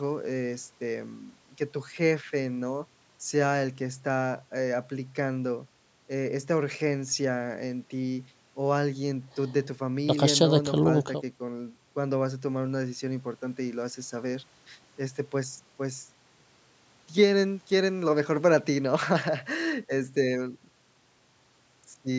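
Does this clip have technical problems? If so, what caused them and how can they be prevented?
No, the speech carries no technical faults; it has passed through a call's normal microphone processing, which trims the lowest bass and leaves nothing above 8 kHz.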